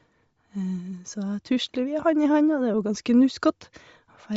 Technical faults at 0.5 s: Bluetooth LC3 compression

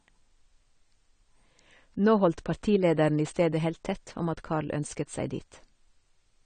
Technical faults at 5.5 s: AAC compression

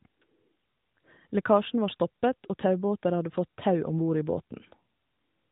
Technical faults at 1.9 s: none

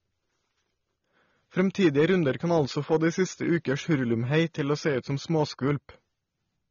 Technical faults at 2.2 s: AAC compression; hard clipping

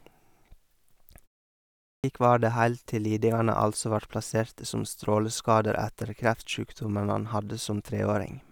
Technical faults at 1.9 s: clipped start after a pause

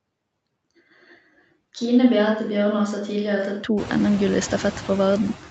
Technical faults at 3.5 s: noise suppressor artifacts; switch to a distant microphone

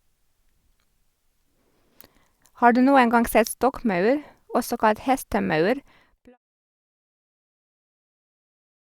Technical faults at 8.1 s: none

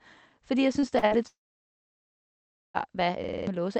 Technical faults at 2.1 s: long network dropout

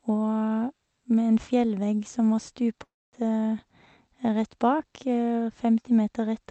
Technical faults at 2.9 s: long network dropout

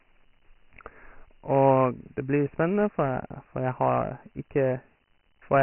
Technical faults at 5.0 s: Dialogic VOX ADPCM

